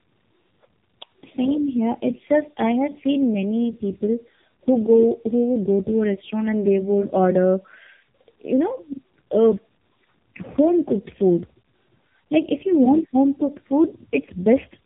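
All the way through, the speech carries tandem speech coding: two low-rate speech codecs in a row, one decoding and the next re-encoding its already damaged output. That stacks up a rough, muffled, warbly quality, nothing above 3.8 kHz, which fits something like G.723.1 feeding AMR-NB.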